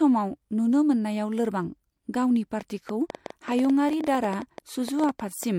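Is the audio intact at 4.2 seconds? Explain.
No. From 2.61 to 5.44 s there is a train of clicks, likely from interference or a faulty connection injecting pulses. Starting just after "नुनो मोननायाव लोरबां गावनि", about 30 similar clicks arrive at an irregular 9.2 per second, peaking around 5 dB above the sound. They are heard as uneven ticking over the speech at 4.2 s.

Throughout the clip, including this moment, the speech shows transcoding between lossy codecs. It was encoded and then re-encoded, and the mixed artefacts fit an MP3 stage near 68 kbit/s followed by HE-AAC near 48 kbit/s. The later codec spends bits preserving the earlier artefacts and adds its own, so both layers of artefacts are heard together. Nothing remains above 20.3 kHz.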